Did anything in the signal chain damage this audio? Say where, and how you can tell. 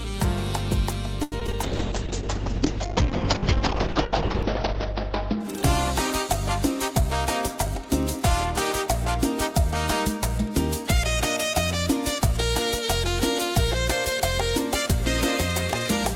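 Yes. At the network stage there is repeated packet loss (robotic sound) from 1.23 to 1.55 s. Four gaps, the longest 85 ms, were patched by extending the preceding sound, so about 37% of that stretch is concealment, with another 60 ms simply missing. It sounds choppy. On a spectrogram the harmonics smear into flat, frozen bands between short dropouts. The waveform shows repeated cycles and brief holes.

In the codec stage a call bitrate drop runs from 1.63 to 7.20 s. The congestion estimate forced the encoder into far coarser coding, which fits a fall from about 64 kbps to roughly 6 kbps. It stays at its worst for about 3 s. Audio bandwidth shrinks from 20 kHz to 6 kHz, so the sound turns muffled. A spectrogram shows the energy above 6 kHz abruptly blanked, with blotchy, quantised texture below.

Inside that stretch, the receiver's jitter buffer was short of data and performed a jitter buffer slow-down from 1.71 to 2.69 s. 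It repeated single pitch periods to rebuild its reserve, adding 38 ms and playing at 96% speed with unchanged pitch. The sound is slightly drawn out. On the waveform, identical adjacent cycles appear. The spectrogram's harmonics stay level while events stretch in time.

From 7.48 to 8.23 s a jitter buffer speed-up does the reverse. After too much audio accumulated, the buffer cut short pitch-period segments, removing about 40 ms and playing at 105% speed. The pitch is the same but the sound is hurried. A spectrogram shows features slightly compressed in time with no frequency shift. The waveform shows small, seamless splices where cycles were dropped.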